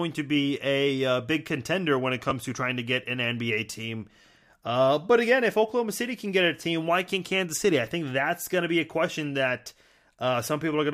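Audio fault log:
2.30 s, repeated buffer: between "big contender when it" and "to trying to get", a short slice plays twice with a hard join, heard as a click. Its length fits a 10 ms buffer replayed once when new audio arrived late.
4.22–4.24 s, repeated buffer: the same short slice sounds three times, giving a brief buzz and dropping about 20 ms of audio.
8.44–8.46 s, repeated buffer: after "I think" and before "going to be a", a triple repeat of a short slice produces a brief buzz, with about 20 ms lost.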